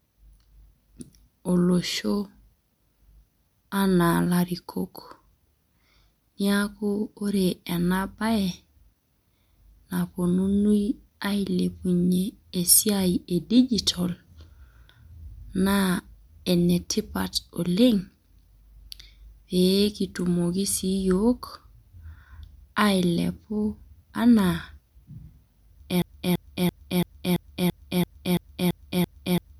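Speech, interrupted at 26.02 s by a broken-record loop: a 0.34 s fragment repeats identically eleven times until the clip ends, likely a stalled player resending its last buffer, unlike echo, which decays.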